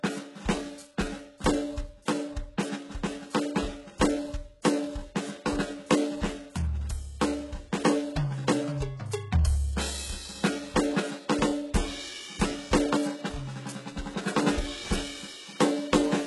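HE-AAC compression, likely the cause, runs through the whole music clip. The treble is rebuilt by copying lower bands upward rather than coded directly, so it sounds gritty and metallic, with nothing above 11.5 kHz. The heavy damage fits a bitrate around 12 kbps.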